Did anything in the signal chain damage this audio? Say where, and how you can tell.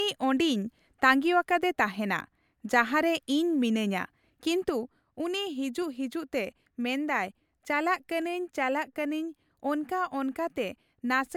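Yes. Single sharp clicks at 2.20, 5.82 and 8.22 s are dropped samples, likely lost at the driver or buffer stage. A handful of samples, a fraction of a millisecond, go missing, so the waveform leaps to a later value. No audible sound disappears, which separates this from a dropout or gap.

At 4.69 s a sudden gain jump lowers the level by about 4 dB, and it stays lower to the end. Speech and background noise fall together, instantly, unlike a compressor or automatic gain control easing down. The likely cause is a gain setting or bit shift applied without a ramp during processing.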